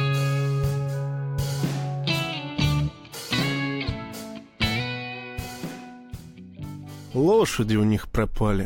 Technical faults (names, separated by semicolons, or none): none